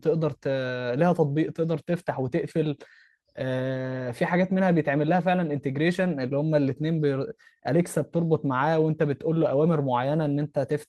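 No technical faults can be heard in this speech recording, and the signal stays steady and intact throughout.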